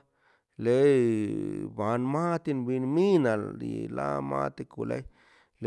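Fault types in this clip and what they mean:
No faults are audible.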